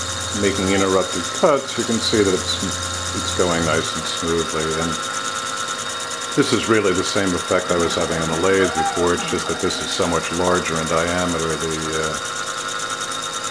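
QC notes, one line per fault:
Nothing here needs flagging; I listened all the way along and didn't catch any problems worth a note.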